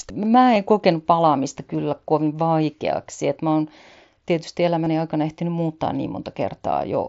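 Concealed Bluetooth headset packet loss occurs at 0.55 s, just before "en kokenut", at 1.77 s, at 3.51 s, just before "oon tietysti", and from 4.84 to 4.87 s, between "mä oon tietysti" and "aikana ehtinyt muuttaa". Each time, audio packets between headset and phone were dropped, and the receiver filled each gap, 7.5 ms per lost packet, by repeating the best-matching stretch of recent waveform. The first three single losses are nearly inaudible. The final 22.5 ms run, which points to three consecutive lost packets, leaves a brief buzzy, held tone and a slight warble as real speech resumes, heard through the light grain of the mSBC headset codec.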